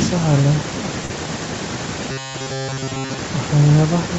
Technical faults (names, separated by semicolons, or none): short stall from a late packet